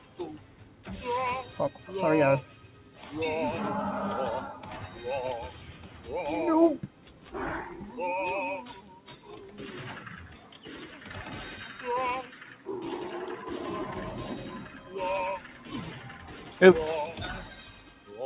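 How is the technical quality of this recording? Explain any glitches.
The quality suffers from a speech-tuned noise suppressor left running on non-speech audio. The band stops near 4 kHz, which fits a narrowband G.711 call codec.

The noise suppressor applied to music or sounds works through the whole clip. It treats steady content and decaying tails as noise. Attacks pass, but sustained parts sink. Level swings by around 10 dB, so the sound pumps and thins.

Sound cut by the noise suppressor shows up in five stretches: 0.00–2.99 s, 5.55–7.29 s, 8.81–10.6 s, 14.71–16.58 s and 17.51–18.1 s. Held portions dip by about 6 to 7 dB. Tails are clipped short.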